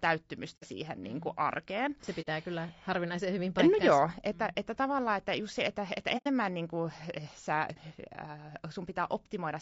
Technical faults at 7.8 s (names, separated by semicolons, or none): low-delay AAC compression; AAC frame loss with muting